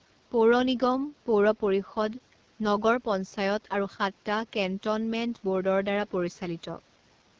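From start to end the speech passes through the AMR wideband (HD Voice) codec at 8.85 kbit/s, one of its lowest rates. The pulse-driven vocal tract model is starved of bits, so voicing turns plainly rough and raspy, and nothing remains above 7.1 kHz. Room noise sits about 36 dB below the speech.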